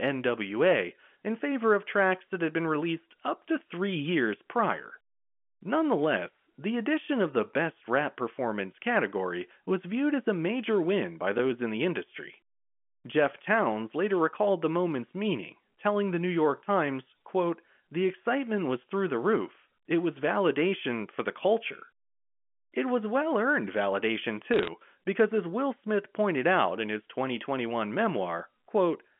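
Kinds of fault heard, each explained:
Block of digital silence: At 11.38 s, between "a major win by" and "in the industry", about 5 ms of the sound drops straight to silence and comes back with no fade. This happens when output is not written in time and the buffer is left empty. The waveform jumps to digital silence and back. Because the gap is so short, the two hard edges merge into a single tick rather than an audible hole.
Bit errors on a digital phone line: From 24.54 to 24.68 s, after "was well earned validation" and before "because as", a short burst of crackle rides over the speech. The G.711 A-law line carries the 200 Hz to 3.4 kHz telephone band, and here roughly one bit in five hundred is flipped. Each error corrupts one 8-bit sample. Hits on the sign or upper bits throw that sample far off its true value, producing sharp ticks while the speech underneath stays intact.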